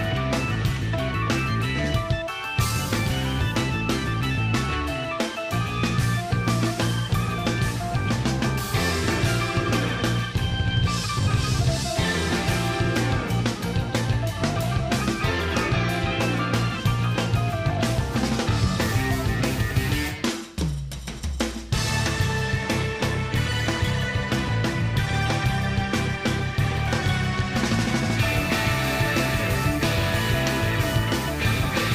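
No technical faults are audible.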